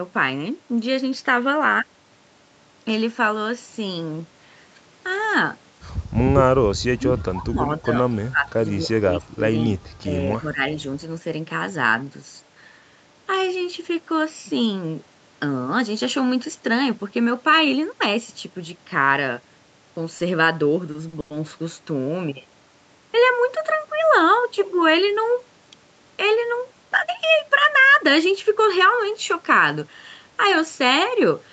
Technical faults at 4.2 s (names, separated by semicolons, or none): none